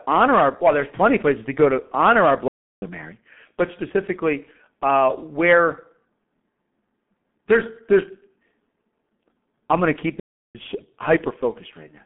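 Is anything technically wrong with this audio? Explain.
Yes, two things stand out.

The whole clip runs through a G.723.1 codec, and it's heavily damaged by it. The speech sits in a narrow telephone band, roughly 150 Hz to 3.6 kHz, with nothing above 4 kHz. The coarse, slow-moving frame-based coding fits a rate of about 6.3 kbit/s. That combination leaves the voice muffled and hoarse, and consonants smear together because the codec can't track fast changes between its long frames.

There are also two playback stalls, where the sound simply drops to silence mid-flow and then carries on. The first runs from 2.48 to 2.82 s, about 340 ms, right after "go to honor our". The second runs from 10.20 to 10.55 s, about 350 ms, just after "I'm going to keep". The likely cause is the player starving for data or its output thread getting blocked, so nothing reaches the output until it recovers.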